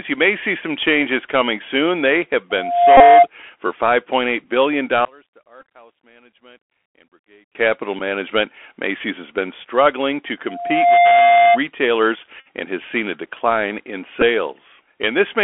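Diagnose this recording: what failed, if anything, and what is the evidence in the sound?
Bluetooth CVSD headset codec, throughout, at the codec stage. The whole clip sits in a narrow telephone band of roughly 300 Hz to 3.4 kHz, with nothing above. The s sounds are scratchy and a granular hiss runs under the speech. CVSD sends one up-or-down bit per sample at 64 kbit/s with an adaptive step size. Loud, fast-changing high content outruns that step, and the result is this plainly audible roughness.

Loudspeaker feedback squeal, from 2.50 to 3.27 s and again from 10.48 to 11.59 s, just after "has been struggling to". This is an acoustic loop between the playback and the microphone in the call path. A single tone at 698 Hz swells over about 0.4 s the first time and about 0.5 s the second. It peaks at about 10 dB above the speech the first time and about 5 dB above it the second time. At that frequency the loop gain exceeds one, so the tone feeds on itself.

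Bluetooth headset packet repeated, on the radio link, at 2.97–3.01 s, 4.45 s, 5.60–5.63 s, 7.99 s, 12.40–12.48 s and 14.21 s. The one at 12.40 s comes just before "and has seen a", and the one at 14.21 s comes just after "seen a decline in". Each is a brief tick, or a buzz near 267 Hz for the longer runs. The gaps cover about 7.5 to 56 ms of audio. When a packet is lost, the chip replays the previous packet's bits, and each replay repeats every 3.75 ms.

Level collapse from 5.05 to 7.55 s, at the playback or channel-mixing stage. The speech drops by about 30 dB and leaves only a faint residue. A drop this deep over a bounded stretch is likely caused by one channel inverted. When polarity is reversed on one side, the content common to both channels cancels on summing to mono, and only the small difference between them survives.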